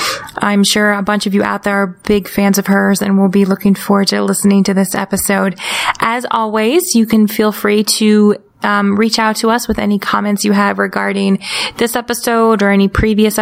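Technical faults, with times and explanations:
throughout, gain pumping: the gain swings by around 20 dB, pulled down under each loud sound, likely from excessive input gain driving a fast limiter.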